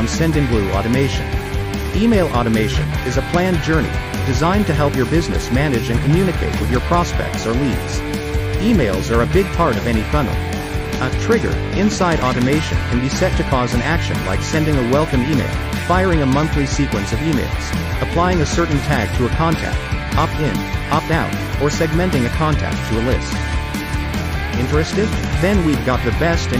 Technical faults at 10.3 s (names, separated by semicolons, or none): none